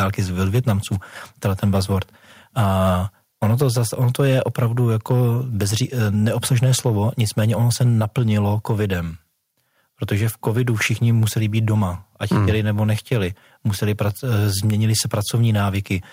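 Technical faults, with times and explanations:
0.00–0.73, 1.44–1.97, 2.58–2.90, 3.43–8.82, 10.12–11.71, 12.31–13.17, 13.82–14.36 and 14.89–15.57 s, microphone overload: the loudest syllables take on a harsh, crackly edge. The likely cause is input gain set too high, driving peaks up to about 3 dB past the converter's ceiling so their tops are sheared flat, on up to a few percent of samples.
3.63 s, microphone volume stepped down: speech and background drop together by about 2 dB in one sudden step, inside a stretch of clipping. This is likely the call software detecting the overloaded input and cutting the device's microphone level once.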